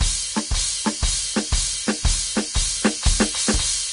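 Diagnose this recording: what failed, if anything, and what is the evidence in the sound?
Vorbis compression, likely, runs through the whole music clip at the codec stage. Nothing remains above 10.5 kHz, and the treble is hissy and grainy, with roughened tones and smeared attacks. Coarse residue quantisation has turned the fine detail into noise, which fits a low bitrate of around 33 kbps.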